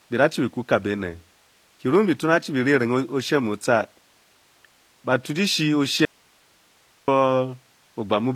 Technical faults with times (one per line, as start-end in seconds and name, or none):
0.00-8.35 HE-AAC compression
6.05-7.08 audio dropout to a faint residue